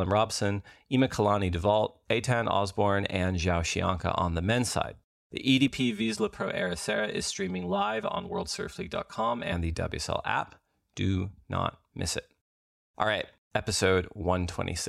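From 5.68 to 9.52 s the speech turns hollow and phasey, the signature of channel delay (comb filtering). One channel runs about 5 ms behind the other, and when the two are summed to mono, what they share cancels at evenly spaced frequencies, starting near 100 Hz and repeating at regular steps above. Unlike flanging, these notches stay fixed instead of sweeping. Unlike simple low-pass dullness, the thinning runs as a comb across the whole spectrum.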